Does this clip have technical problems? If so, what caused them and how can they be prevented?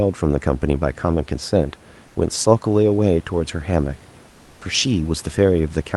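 Yes. From 2.07 to 2.15 s and again from 4.29 to 4.61 s, the real room background in the speech pauses gives way to a smooth, featureless hiss about 2 dB quieter, sitting roughly 30 dB below the loudest speech. This is comfort noise in place of the background, likely from Opus DTX: the sender stopped transmitting during silence and the receiver synthesised shaped noise instead. Disabling DTX on the sending side prevents this.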